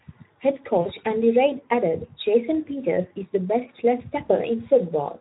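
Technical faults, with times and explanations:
Throughout: Speex codec, heard as hoarse, noisy speech. CELP coding at a rate that fits about 11 kbps leaves too few bits for an accurate excitation signal.
0.81–0.90 s and 4.25–4.31 s: VoIP packet loss concealed by the speech codec. Two lost 20 ms frames each time were filled by extrapolating the last pitch and filter, giving a brief fading smear followed by weak or distorted speech.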